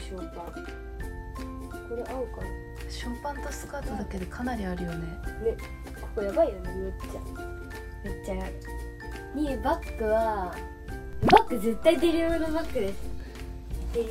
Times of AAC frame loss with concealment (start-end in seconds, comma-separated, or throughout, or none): none